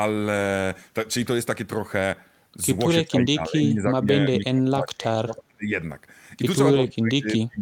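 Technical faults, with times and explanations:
3.04–5.75 s and 6.74 s to the end, speech suppressed in double talk: the voice sinks, at its deepest by around 30 dB, likely because an echo canceller heard both sides at once and turned the near talker down with the echo.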